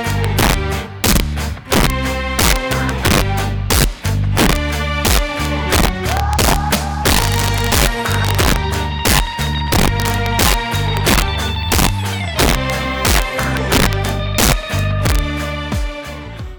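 Violent, sharp cracks break out on the loudest peaks throughout the audio: integer overflow, where peaks pushed about 2 dB past full scale wrap to the opposite sign instead of clipping, affecting roughly three percent of samples.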